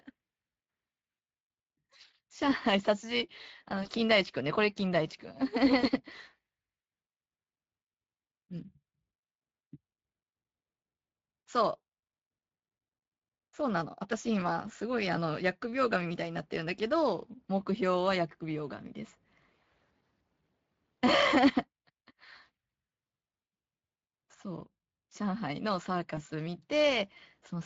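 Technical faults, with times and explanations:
throughout, Speex codec: The speech has a plainly audible coded sheen, hoarse and grainy, with a noisy roughness riding on the voice rather than a clean tone. This comes from Speex, a CELP codec that rebuilds the voice from a pitch predictor, a spectral filter and a coded excitation. The damage level fits a setting around 20 kbps, where the excitation is still approximated coarsely enough for that grain to be heard.
3.83–3.89 s, 5.79–5.87 s and 26.15–26.20 s, VoIP packet loss concealed by the speech codec: At each of these moments the voice briefly smears into a stretched sound that sags in level, then takes a moment to sound natural again. Packets went missing, and the decoder filled the gap by repeating its last pitch and filter with falling gain. The gaps fit one lost 20 ms frame at 3.83 and 26.15 s and two at 5.79 s. The decoder state needs a short while to recover, so the distortion outlasts the loss itself.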